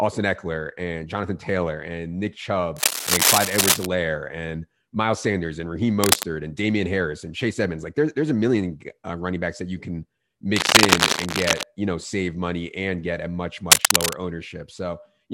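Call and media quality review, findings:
Cable scratch noise on speech, four bursts: 2.76–3.86 s, 6.01–6.25 s, 10.56–11.63 s (between "backs that you can" and "you know save money"), 13.71–14.23 s (after "and get a much"). Dense, uneven scratching sits a few dB above the speech. Likely a worn cable or connector being moved, with its contact resistance changing rapidly and injecting crackle into the signal.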